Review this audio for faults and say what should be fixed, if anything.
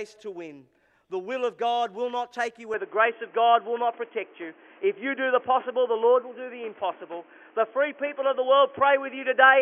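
At 2.74 s the sound turns dull and boxy, and stays that way to the end. Nothing passes above 3.3 kHz. The level shifts by about 5 dB, and a faint new noise floor appears, with no gap at the change. This is likely the input switched to a poorer device. Lock the recording input so it cannot change mid-take.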